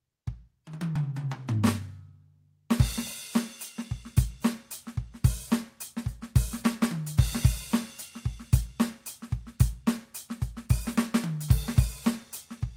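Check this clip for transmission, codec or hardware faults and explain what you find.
One transmission fault is present in this music clip: a skip ahead at 0.95 s. A stretch of about a fifth of a second was discarded while later audio was already queued, so playback jumps straight forward with no gap, and the music on either side is spliced almost directly.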